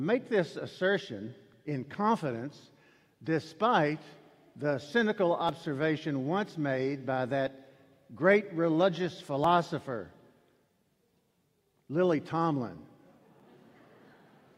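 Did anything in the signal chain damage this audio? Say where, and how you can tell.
Yes, there are short skips at 3.51, 5.49, 7.47, 9.44 and 13.40 s, spaced at 2 s multiples. This pattern likely comes from the buffer or chunking stage dropping about 20 ms at each block boundary and butt-joining the surrounding sound: audio missing between chunks.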